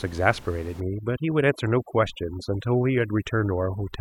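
From 0.80 s to the end, overdone noise removal sets in: a noise reduction stage is working far too aggressively, pulling individual frequency bands down or shutting them off whenever they come close to its estimate of the room noise, which sits about 20 dB below the speech. Quieter parts of the speech are removed along with that noise, so the background drops and breaks up into twinkling, warbling specks.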